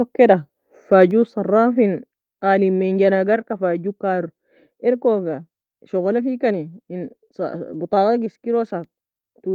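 At 1.11 s the whole speech signal, voice and background together, drops in level all at once by about 5 dB and stays at that lower level afterwards. There is no fade; it is a single step. This is a microphone volume stepped down event, likely the call software judging the input too hot and cutting the microphone's input volume in one move, so everything captured after that moment arrives quieter.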